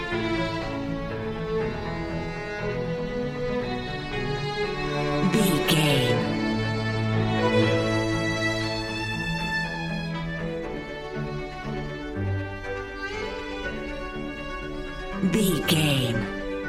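No technical faults are audible anywhere in it.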